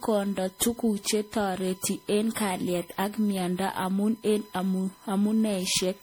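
A steady, fixed-pitch whine at 1 kHz sits about 30 dB under the speech throughout. This is USB whine: current drawn in 1 ms bus frames leaking in through power or ground.

Throughout, the speech also sounds swirly, smeared and hollow, with blurred attacks. The likely cause is generation loss from about seven rounds of MP3 re-encoding, which fits 64 kbit/s passes.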